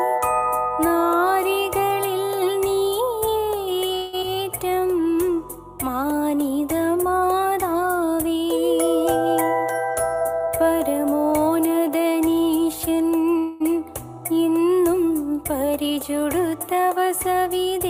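The audio shows a cluster of jitter-buffer faults typical of a packet-switched call. At 3.95 to 4.15 s and again at 13.38 to 13.71 s there is a call audio freeze: the last sound is carried on as a fading buzz or hiss, about 175 ms of filler in the first case and about 222 ms in the second, with no silence. Playback then resumes where it stopped, so nothing is lost and the stream is simply pushed later. The likely cause is packets stalling in transit until the jitter buffer ran dry. Immediately after the first freeze, at 4.21 to 4.24 s, comes a skip ahead. Roughly a tenth of a second of audio is dropped and the two sides are spliced almost directly, with only a brief join of about 14 ms. Later audio was already waiting when the stretch was dropped, and the jump wins back about 100 ms of the delay the freeze added. From 4.35 to 4.93 s a jitter buffer slow-down follows. Playback runs at about 87% speed while pitch stays the same, with sounds stretched. 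About 83 ms is inserted by repeating single pitch periods many times to rebuild the buffer's reserve. Two jitter buffer speed-ups run the other way. From 9.95 to 11.48 s the audio plays at about 110% speed and sounds hurried, with roughly 150 ms cut out in short pitch-period slices. From 15.63 to 15.98 s it plays at about 111% speed, with roughly 50 ms removed. In both stretches pitch is unchanged, and the receiver is trimming excess buffered audio to bring latency back toward its target.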